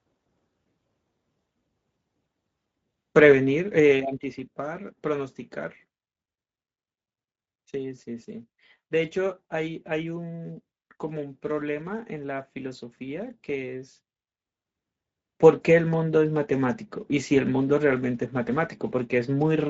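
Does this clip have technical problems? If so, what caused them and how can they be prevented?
Yes. Speex codec damage runs throughout the speech, from start to finish. Speex is a CELP codec that models speech from a compact set of excitation parameters. At the rate this sound points to, around 16.8 kbps, too few bits are left to rebuild the voice faithfully, so it comes out noisy and hoarse. Nothing is present above 7.7 kHz, and the top of the band is a shaped, noise-like fill rather than real detail. To prevent this, record or transmit with a modern wideband codec such as Opus at a higher bitrate, or keep an uncompressed copy.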